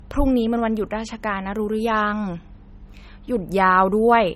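Across the whole clip, the speech carries smeared low-bitrate MP3 artefacts and stops at 16.5 kHz. It is likely low-bitrate audio saved at a high bitrate.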